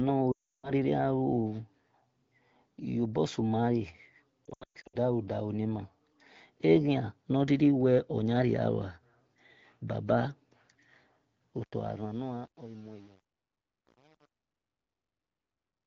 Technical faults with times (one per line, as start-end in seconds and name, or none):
0.31-0.71 lost AMR speech frames
4.45-4.96 lost AMR speech frames
11.56-15.86 truncation distortion on a fade